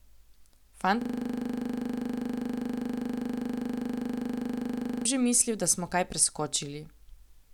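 From 1.02 to 5.05 s, a system hang loop replays one 40 ms buffer as a 25 Hz buzz, showing identical waveform blocks and regular spectrogram stripes.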